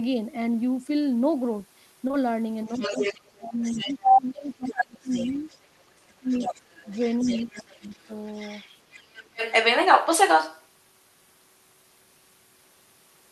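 Short concealed packet loss at 2.07 to 2.11 s and again at 2.11 to 2.15 s: two back-to-back 20 ms chunks never arrived in time, and the receiver filled each by extending the preceding sound before blending back. The result is a brief smear lasting about 40 ms.

Speech suppressed in double talk from 2.66 to 5.50 s, with the talker dipping by about 15 dB for roughly two seconds in total. It happens again at 6.03 to 6.73 s, sinking by about 25 dB, and at 7.23 to 8.10 s, by about 20 dB. The voice dips, likely because the echo canceller, unable to separate the talker from loudspeaker echo, pulled both down.

The other side's voice leaking through from 2.68 to 3.32 s at about the talker's own level, then from 3.63 to 4.17 s at about 10 dB above it, and from 4.65 to 10.67 s at about 5 dB above. This second voice is likely loudspeaker echo that the canceller failed to remove from the microphone signal.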